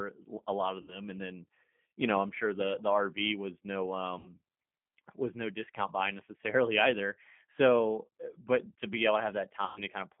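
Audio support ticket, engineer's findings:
G.729 codec, whole clip: narrow phone band, roughly 150 Hz to 3.4 kHz, nothing up top, and a rough, slightly synthetic edge that's easy to hear. Sounds like 8 kbit/s G.729, which rebuilds the audio from a tract filter, pitch predictor and sparse pulses.

VoIP packet loss concealed by the speech codec: dropouts at 0.82 to 1.00 s (after "a lot of", before "and then you know"), 4.19 to 4.31 s (after "the rv was no"), and 9.64 to 9.81 s (after "but to be able"). The first two lose about 60 ms each and the last about 120 ms, which fits roughly three and six 20 ms packets. The decoder stretches the last pitch and filter into a buzzy tone or coloured noise that fades, and the recovery afterwards is weak.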